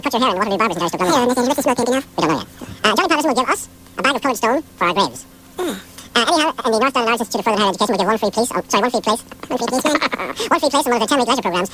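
From start to finish, the samples are clocked out at double the rate they were captured at, with no resampling in between: a wrong sample rate. The effect is a doubling, consistent with 16 kHz material being played back at 32 kHz. Because speed and pitch are tied to the same clock, everything runs twice as fast and sits a full octave, 12 semitones, higher, giving the whole clip a rushed, chipmunk-like character.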